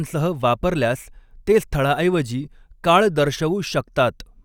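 A short speech recording, and nothing is technically wrong with it.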